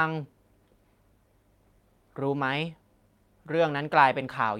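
Speech recording with no technical faults to report. Nothing in the audio calls for a time or a cause.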